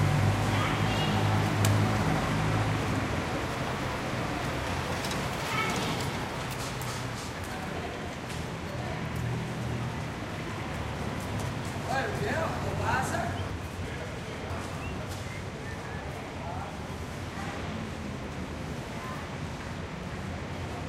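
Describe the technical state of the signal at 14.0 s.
At 14.0 s the signal is inside a chunks-out-of-order fault spanning 13.50 to 15.00 s: one 500 ms chunk was delivered two chunks late, so it plays after its successors. Nothing is lost, but the reshuffled sound jumps at three hard joins.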